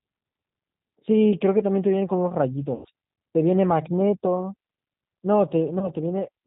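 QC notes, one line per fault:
Throughout: G.729 codec. The speech passed through an 8 kbit/s link that keeps only a vocal tract filter, a pitch predictor and a few pulses per short frame, discarding everything above 4 kHz. The result is plainly audible: speech stays intelligible, but it is band-limited and slightly rough, with a synthetic edge, and any background noise warbles instead of sounding steady.
2.75 to 2.88 s and 5.79 to 5.89 s: VoIP packet loss concealed by the speech codec. About 100 ms of audio went missing in the first gap, which fits five lost 20 ms packets, and about 20 ms in the second, a single packet. The decoder filled each hole by extending its last pitch and filter while lowering the level, so the sound smears into a fading buzzy tone or coloured noise. Because each frame builds on the one before, it stays weak briefly after packets resume.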